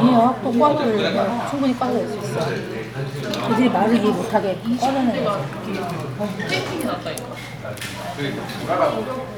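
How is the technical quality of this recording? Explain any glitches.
The technical quality holds up, with no glitches to explain anywhere in the recording.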